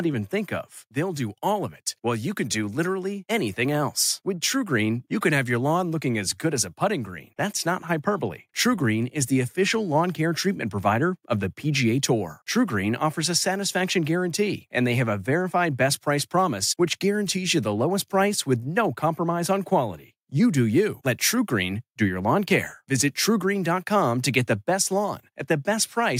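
From 0.31 s to 4.55 s there is automatic gain rising. The gain control judged the input too quiet and raised its gain step by step. The level climbs by about 4 dB. Speech and background swell together across those four seconds.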